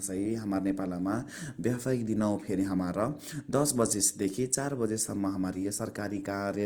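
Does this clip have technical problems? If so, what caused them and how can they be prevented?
Yes. Throughout, Opus compression was likely running short of bits in its music mode, which fits a rate around 24 kbps. It refills starved bands with folded or noise content, so the speech sounds plainly rough and grainy. Encoding at a higher bitrate prevents this.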